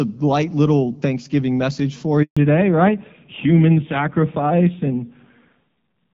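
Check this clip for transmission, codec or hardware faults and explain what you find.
Two transmission faults occur, back to back, in this speech clip.

A handover gap runs from 2.23 to 2.37 s, just after "message for". The call switched networks, and no speech frames arrived for 140 ms. The speech dies away within a few tens of milliseconds into silence. Whatever was said in that window is gone.

A fallback to narrowband follows at 2.37 s and lasts to the end. The call left the wideband HD Voice path, whose sound before the gap is clear, with light codec damage. Nothing above 4 kHz remains. The speech turns muffled and rough, which fits narrowband AMR at a low rate, around 5.9 kbit/s.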